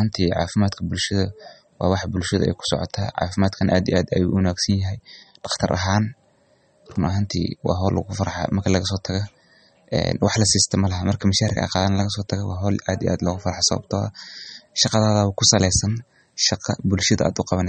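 From start to finish, nothing reaches above 8.4 kHz. The speech sounds watery and swirly, with plainly audible damage. This is likely MP3 compression at a low bitrate, around 32 kbps. The encoder removed the treble and dropped weak frequency lines frame by frame.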